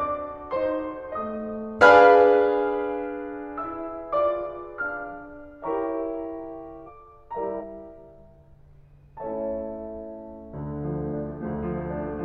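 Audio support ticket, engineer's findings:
Damaged data in a compressed stream, 6.83–6.89 s, 7.57–7.64 s, 11.38–11.44 s: brief glitches in the music, about 60 ms each. Corrupt frames in the compressed data break decoder sync until it locks onto the next frame header.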